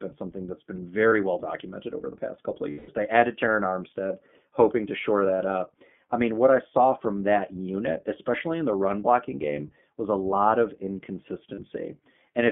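Throughout, the speech carries iLBC codec damage. The audio is confined to roughly 150 Hz to 3.4 kHz, and the voice has a plainly rough, synthetic edge from independent frame-by-frame excitation coding, consistent with 20 ms frames at about 15.2 kbps.

Lost iLBC frames occur at 1.08 to 1.13 s (40 ms), 2.70 to 2.89 s (180 ms, the longest), 7.73 to 7.75 s (20 ms) and 11.54 to 11.60 s (40 ms). The decoder repeats the last pitch cycle with added noise, giving a held, buzzy vowel that fades during the longer gap before clean recovery.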